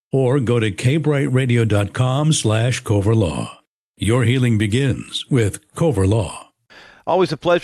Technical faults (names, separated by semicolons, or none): none